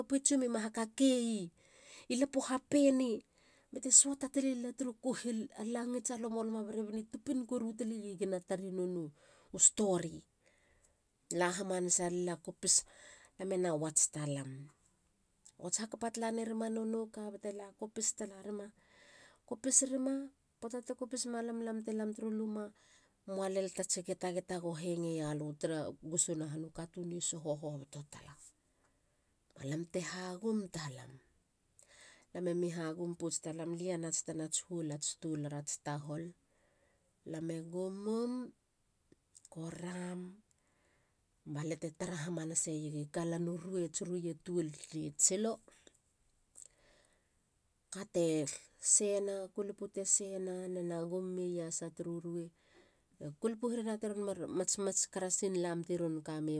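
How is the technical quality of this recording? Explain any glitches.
No glitches or technical faults can be heard anywhere in this speech recording.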